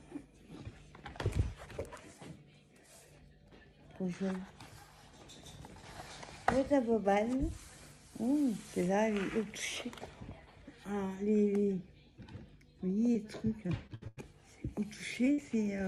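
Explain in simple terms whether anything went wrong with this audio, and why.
Short concealed packet loss at 13.13 to 13.17 s and again at 15.25 to 15.28 s: about 20 ms of the stream arrived too late. The receiver covered each gap by stretching the sound just before it, leaving a quick smear or wobble.

Repeated packet loss (robotic sound) from 13.67 to 14.19 s: four separate gaps, the longest 92 ms, follow closely on each other. About 200 ms is patched, roughly 38 percent of that stretch, so the sound turns choppy, with pieces missing.

Burst of packet loss at 15.32 to 15.40 s: about 60 ms in a row never arrived. The receiver kept the last sound going and faded it down. The result is a brief held buzz or dying hiss before the audio picks up again further on.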